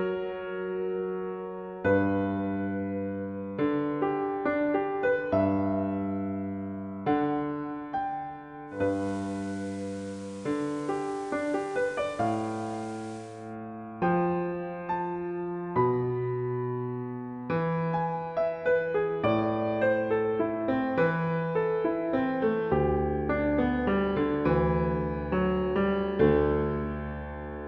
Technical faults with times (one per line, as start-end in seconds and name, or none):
8.67-13.57 digital radio blending to analogue